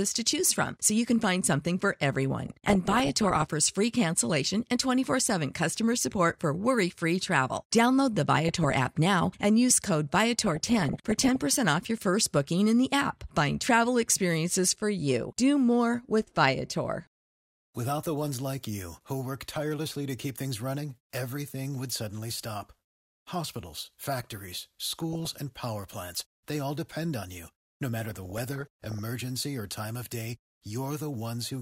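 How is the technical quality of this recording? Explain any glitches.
The recording has five bursts of DAB burbling: from 2.47 to 3.42 s, after "can find something for" and before "free cancellation and"; 8.48 to 8.79 s; 10.43 to 11.43 s; 24.92 to 25.41 s, before "power plants they all"; and 28.01 to 28.99 s, before "or time of day". Weak reception let bit errors, at a rate of about 0.7 percent, slip past error correction into the MP2 data. Corrupted samples put short blips of noise into single sub-bands, and corrupted scale factors make sub-bands jump in level for up to a frame, so the speech is broken up by short noise blips and sudden level jumps.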